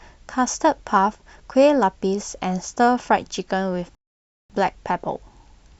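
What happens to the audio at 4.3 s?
At 4.3 s the speech is halted by a rebuffering stall that runs from 3.95 to 4.50 s. The player exhausted its downloaded audio and waited for more, so the sound drops abruptly to silence and then picks up exactly where it left off, with nothing skipped but about 549 ms added. On a waveform this appears as a flat line between those times; a spectrogram shows a clean vertical gap with no energy at any frequency.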